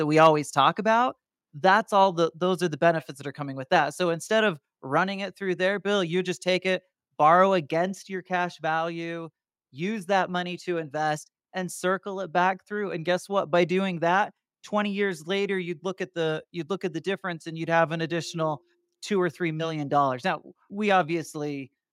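The microphone input was likely set too high, producing a microphone overload from 0.23 to 0.27 s: peaks pushed about 3 dB past the converter's limit had their tops sheared flat, clipping a small share of samples and giving that loud moment a harsh, crackling edge. The call software likely then reacted by stepping the microphone volume down at 1.02 s and 2.04 s (about 2 dB each) and again at 8.16 s (about 1 dB). Each step drops the speech and the background together in a sudden step.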